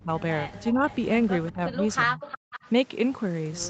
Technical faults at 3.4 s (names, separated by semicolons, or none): none